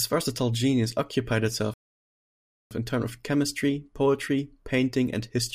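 At 1.74 s, after "versatile genius occupied", the speech cuts to silence for about 0.97 s. This playback stall likely came from starved or blocked output. It resumes at "in turn with chemistry".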